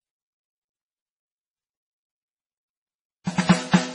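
A starved encoder, likely MP3 at a very low bitrate, has squeezed this short piece of music throughout. With too few bits to go round, it has thrown away everything above 10.4 kHz and let weaker frequency components drop in and out from one frame to the next. The result is dull, muffled treble and a watery, swirling texture, with metallic chirps on bright, noisy parts and blurred attacks. The damage is heavy enough to point to a bitrate in the region of 24 kbps. The same block-based coding causes a pre-echo from 3.24 to 3.27 s. A sharp attack lands late in a coding block, and the quantisation noise meant to sit under the loud hit is spread across the whole block instead. About 28 ms of hiss fills the quiet moment before the attack, which arrives softened and smeared rather than crisp.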